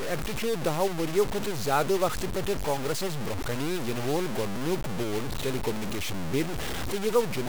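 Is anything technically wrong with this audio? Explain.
Yes. Throughout the speech there is heavy grainy distortion, with error nearly as loud as the signal, that tracks the sound and sputters or drops out in quiet stretches. This is likely low bit depth without dither, truncated to what sounds like about 4-bit resolution.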